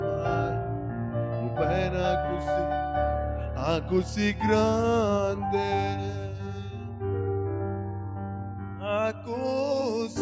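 No technical faults can be heard anywhere in the clip. No working path is described for it, so there is nothing further to report about how the signal chain behaves.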